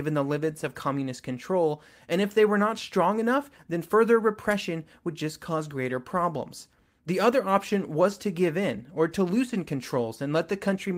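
Nothing in this recording trips any alarm, as no dropout, glitch, distortion or other technical fault turns up anywhere along its run.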